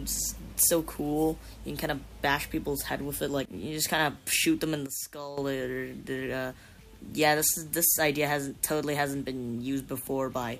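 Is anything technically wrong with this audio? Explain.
Yes. From 4.86 to 5.38 s there's a sudden gain jump: the level drops by about 12 dB in a single step, background and all, then snaps back. That's likely a digital gain change applied instantly, with no ramp to smooth the transition.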